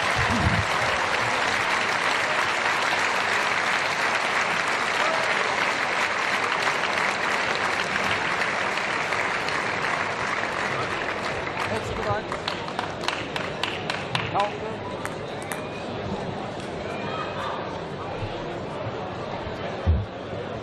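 Nothing here trips the ear as a fault; the sound just runs along its own way with no glitch, dropout or break to point at.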